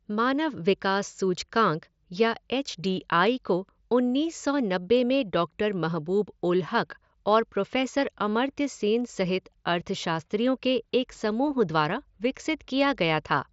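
No technical faults are audible.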